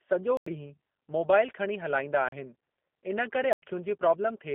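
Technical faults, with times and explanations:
Throughout: G.729 codec at 8 kbit/s, with plainly audible damage. Each 10 ms frame is rebuilt from a vocal tract filter, pitch predictor and sparse pulses, so it sounds rough and synthetic. The spectrogram shows an empty band above 3.5 kHz and little below 200 Hz.
0.37–0.46 s, 2.29–2.32 s and 3.53–3.62 s: block of digital silence. The first and last gaps are 93 ms, which fits a 4096-sample buffer that wasn't filled in time. The middle one is 36 ms. Each cuts abruptly to silence and back. The waveform shows flat lines and the spectrogram shows blank vertical strips.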